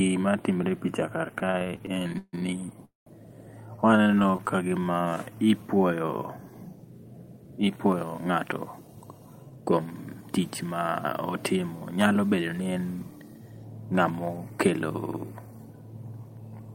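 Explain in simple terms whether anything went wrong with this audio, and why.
Right after "timre e picha kar", from 1.39 to 2.35 s, the speech keeps catching and dragging through 16 little hitches, the longest about 150 ms. About a third of that stretch is filler rather than real sound. This is repeated stalls (stutter). The call's data kept arriving late, so the receiver's small holding buffer ran dry again and again. Each time, it stretched out the last bit of sound until more arrived. Nothing is lost, but the rhythm is broken. The same thing returns from 3.76 to 4.56 s, this time as 15 shorter hitches of at most 29 ms, with about a fifth of the stretch filled in.

Between 2.85 and 3.08 s the speech halts completely. It holds for about 0.21 s, including roughly 0.15 s of silence, then picks up exactly where it stopped. That is a call audio freeze. The likely cause is data held up on its way, leaving the receiver with nothing to play, so it paused and inserted a gap instead of skipping anything.

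From 4.31 to 5.64 s the speech runs at about 87% speed with its pitch unchanged, so sounds are drawn out. This is a jitter buffer slow-down. The receiver was short on reserve audio, so it repeated tiny slices of sound to build a cushion, adding about 0.19 s in total.

From 7.37 to 10.39 s the opposite happens. The speech runs about 9% fast and sounds hurried, again with unchanged pitch. This is a jitter buffer speed-up. The receiver had more audio stored than it wanted, so it trimmed tiny slices to cut the delay, removing about 0.3 s overall.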